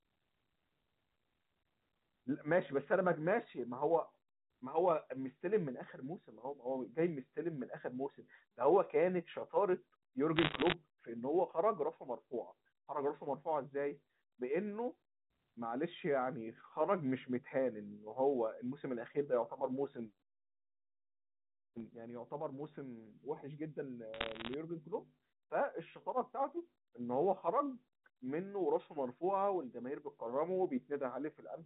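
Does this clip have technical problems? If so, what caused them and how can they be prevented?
Yes. Bit errors on a digital phone line produce two bursts of crackle, from 10.36 to 10.74 s and from 24.14 to 24.54 s, with an error rate of around one percent. Each flipped bit corrupts one sample of the 8 kHz A-law telephone signal, and hits on the sign or upper bits give sharp ticks. On a waveform these show as isolated single-sample spikes, and on a spectrogram as thin vertical streaks up to 4 kHz. Error-correcting line coding or a cleaner, better-shielded digital link prevents this.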